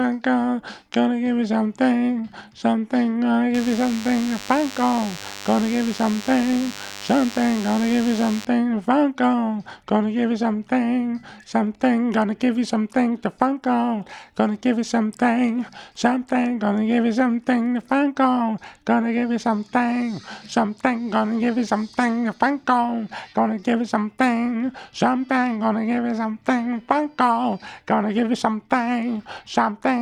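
From 3.54 to 8.45 s there's DECT cordless phone buzz, sitting roughly 15 dB under the main sound. A nearby DECT handset or base fires a radio burst every 10 ms and the audio circuitry rectifies it, so you get a steady 100 Hz buzz with lots of harmonics.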